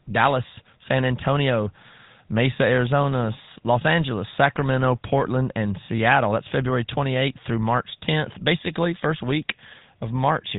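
From start to finish the speech carries GSM full-rate codec damage, plainly audible as a buzzy, gravelly roughness. The codec rebuilds the voice from a vocal-tract model driven by sparse regular pulses, at a rate that fits 13 kbps. A spectrogram shows nothing above 3.8 kHz and coarse, smeared harmonics.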